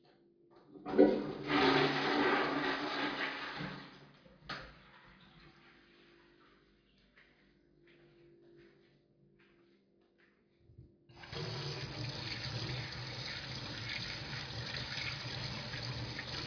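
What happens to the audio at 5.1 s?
Nothing goes wrong at 5.1 s: the sound carries straight through that moment intact, with no dropout, click, glitch or other fault.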